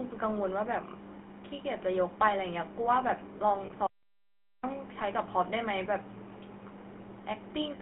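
Throughout, the speech has been squeezed through the GSM full-rate codec, at a rate consistent with its 13 kbps setting. The codec rebuilds the voice from a vocal-tract model fed by a sparse, evenly spaced pulse train, so fine detail in the excitation never reaches the listener. The result is a plainly audible buzzy, gravelly roughness laid over every syllable, confined to a narrow band running from 200 Hz to 3.5 kHz.

From 3.66 to 3.71 s there are lost GSM frames. The decoder lost about 40 ms of data, which fits two consecutive 20 ms frames, and filled the gap by reusing the parameters of the last intact frame. Instead of a clean dropout, the sound briefly freezes into a rough, metallic ring before normal decoding resumes. Because the gap is so short, it is never cut to silence.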